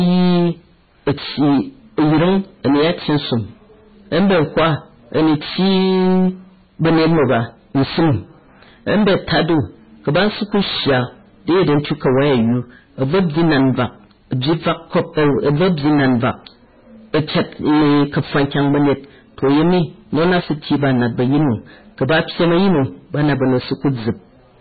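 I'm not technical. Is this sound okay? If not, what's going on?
No. Two problems run through the whole clip, from start to finish.

The first is hard clipping. The speech was fed into the recording chain far louder than it could handle, so everything above its limit was sliced off flat. Nearly a third of the sound sits against that ceiling, which is why every loud moment comes out as a harsh, buzzing fuzz instead of a clean voice.

The second is heavy damage of the kind MP3 compression causes, likely from squeezing the file down to a very small size. To save space, everything above about 4.5 kHz was thrown away, so the speech sounds dull and muffled, with s sounds blunted. The quieter details flicker in and out, giving a watery, swirling quality behind the voice.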